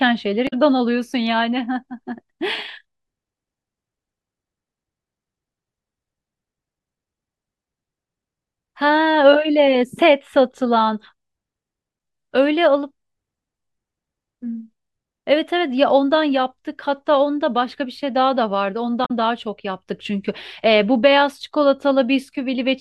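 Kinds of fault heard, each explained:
Damaged data in a compressed stream: corrupted frames make the decoder lose sync, giving brief glitches at 0.45 and 19.02 s.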